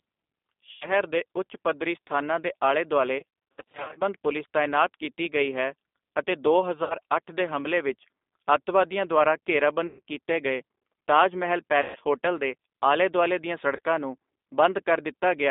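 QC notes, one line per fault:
Throughout: G.729 codec, speech squeezed into roughly 250 Hz to 3.6 kHz at 8 kbit/s, rough and synthetic, spectrogram empty above 3.6 kHz.
0.71 to 0.88 s: VoIP packet loss concealed by the speech codec, about 100 ms extrapolated as buzzy fading tone, smeared harmonics and decaying waveform envelope.
3.19 to 4.01 s, after "ਪੱਧਰੀ ਸਥਾਨਾਂ ਦੇ ਆਲੇ" and before "ਪੁਲਿਸ ਤਾਇਨਾਤ ਕੀਤੀ ਗਈ": VoIP packet loss concealed by the speech codec, 460 ms scattered over 800 ms with gaps up to 60 ms, repeated buzzy dropouts and weak recovery, visible as a chopped, flattened envelope.
6.84 to 6.94 s, 9.87 to 10.01 s (after "ਹਮਲੇ ਵਿੱਚ ਅੱਤਵਾਦੀਆਂ ਦੁਆਰਾ", before "ਕੀਤੇ ਗਏ ਤਾਜ ਮਹਿਲ"), 11.82 to 11.97 s: VoIP packet loss concealed by the speech codec, 60, 120 and 130 ms stretched into fading buzz, frozen stripes on the spectrogram.
13.76 to 13.80 s, after "ਦੇ ਆਲੇ ਦੁਆਲੇ ਦੀਆਂ": VoIP packet loss concealed by the speech codec, a brief 30 ms smear with a small dip in the waveform envelope.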